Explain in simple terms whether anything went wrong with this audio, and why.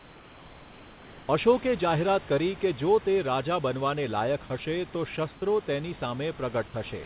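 Two kinds of fault can be heard in this speech recording.

Comfort noise in place of the background: from the start to 1.28 s, before "અશોકે જાહેરાત કરી કે", and again from 5.34 to 5.42 s, after "બનવાને લાયક હશે તો", the real room sound becomes flat, slightly quieter hiss. The sender likely paused transmission and the receiver filled in.

Sound dropped by the voice detector: from 4.48 to 4.50 s, between "તે રાજા બનવાને લાયક" and "હશે તો", and at 7.04 s, a tiny slice of sound turns into steady noise. The detector likely mistook it for background.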